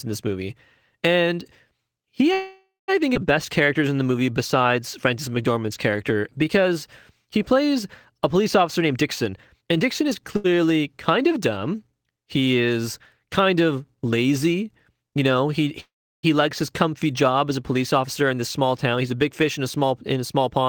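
A speech recording with several network-timing faults. At 2.33 to 2.90 s, just before "I think", and again at 15.80 to 16.25 s, the sound hangs as a fading buzz or hiss that drops into silence (about 180 ms, then 340 ms) before resuming intact. That is a call audio freeze, likely packets held up until the jitter buffer ran dry. A skip ahead at 3.14 to 3.17 s loses roughly 0.3 s of audio and splices the two sides almost directly, so unlike the freeze it removes material instead of inserting a gap. Jitter buffer slow-down runs from 3.66 to 6.75 s at 91% speed, adding 270 ms, and from 7.23 to 7.55 s at 90%, adding 40 ms. The pitch stays the same while sounds are drawn out by repeated pitch periods, which sets it apart from a freeze's held buzz. Jitter buffer speed-up starts after "a police" at 8.62 to 10.11 s, running at 117% and cutting about 300 ms, and again after "job as a police" at 18.07 to 20.66 s, at a milder 106% that cuts around 150 ms. 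Pitch is again unchanged, but the delivery sounds hurried. A short stall from a late packet at 10.36 to 10.46 s stretches the current sound by 78 ms with a slight buzz or dip. Nothing is lost, and it is far briefer than either freeze.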